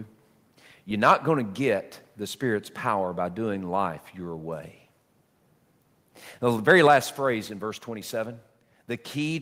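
Microphone overload appears from 1.04 to 1.14 s, just before "going to get the", and again from 6.7 to 6.97 s, before "phrase in verse". The input was likely driven about 4 dB and then about 2 dB past the converter's ceiling, flattening a few percent and then around one percent of samples into squared-off waveform peaks, heard as harsh crackle and seen as smeared high-frequency energy on a spectrogram. At 6.87 s, during that second overload, the microphone volume steps down by 4 dB, so voice and background drop together at once, visible as an abrupt narrowing of the waveform envelope.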